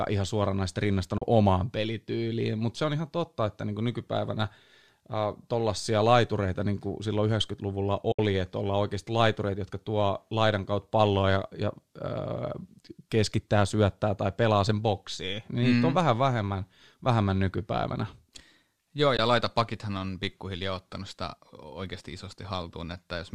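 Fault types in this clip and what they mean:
AAC frame loss with muting: at 1.18 s, after "ihan suoranaisesti", 8.12 s, before "että ollaan oikeasti laitureita", and 19.17 s, before "laita pakithan on pikkuhiljaa", the speech drops into soft-edged silences of about 40, 70 and 20 ms, where lost frames were decoded as zero spectrum and the overlapping windows faded out and back in.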